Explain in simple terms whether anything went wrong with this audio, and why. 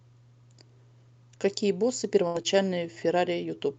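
Yes, two things went wrong. First, a burst of packet loss: from 2.27 to 2.37 s, a run of the speech's data never arrived in time. The receiver held the last sound for about 70 ms, fading it into a buzz or hiss, then jumped ahead, skipping roughly 80 ms.

Moments later, at 2.42 to 2.47 s, there was a short stall from a late packet. One packet arrived behind schedule, so the receiver stretched the previous sound by about 18 ms while waiting. Nothing is lost, but that sound lingers slightly too long.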